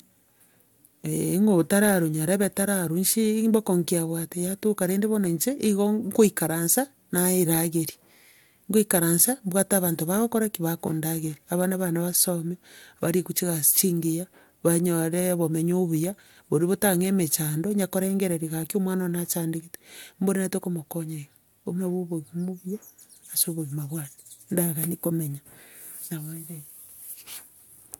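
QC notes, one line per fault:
Nothing to flag here, the speech runs along without a single problem worth noting.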